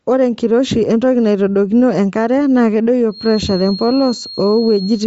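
A speech clip carrying a breathy, grainy edge throughout, with nothing above 7.7 kHz. This is likely Bluetooth LC3 compression at a low rate, around 32 kbps, and the noise-filled top band sets it apart from a plain low-pass filter. From 3.07 s to the end, a thin, steady 4.2 kHz whistle sits well below the speech and swells and fades slowly in level. This is a feedback whistle, likely from a loudspeaker-to-microphone loop held at the edge of feedback, and unlike true howl it never builds or runs away.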